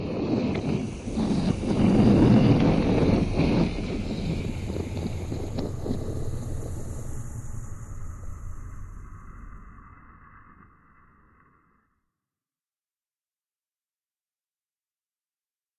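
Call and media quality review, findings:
No audible faults found; nothing to attribute to capture, transport or playback components.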